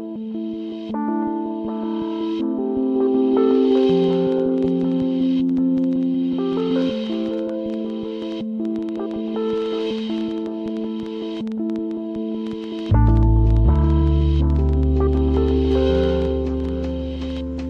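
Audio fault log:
3.55–17.38 s train of clicks: about 6.9 uneven, alike pulses per second near the sound's own level, likely interference or a faulty connection or supply; thin vertical spectrogram lines, sharp waveform spikes.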